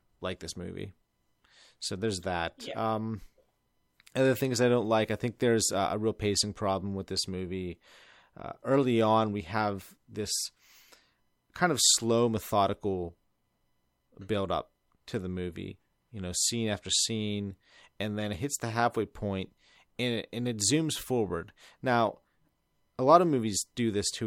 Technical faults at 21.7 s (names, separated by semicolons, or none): none